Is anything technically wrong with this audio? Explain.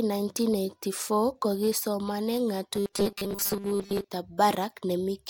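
Yes, there's robotic sound from repeated short buffers, running from about 2.75 to 4.09 s, right after "kokii somane". The speech turns into a stiff metallic buzz, locked at 200 Hz, that still loosely tracks the words. The likely cause is audio arriving too slowly, so playback keeps looping a tiny slice instead, which fits a slice around 5 ms long. Most of that stretch is repeats, with the real audio skipped.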